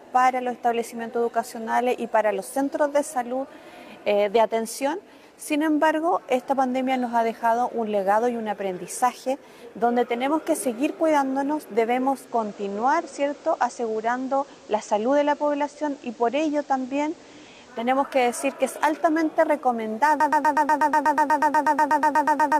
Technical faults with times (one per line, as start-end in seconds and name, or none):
12.06-17.97 digital radio blending to analogue
20.20-22.59 broken-record loop